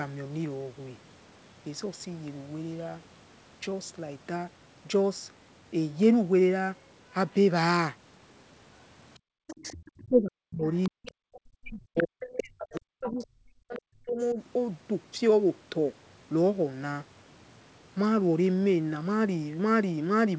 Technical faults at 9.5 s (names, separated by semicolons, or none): other side's voice leaking through; background gated by the echo canceller